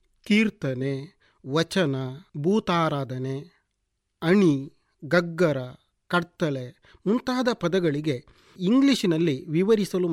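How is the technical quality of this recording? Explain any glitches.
No glitches can be heard anywhere in this recording.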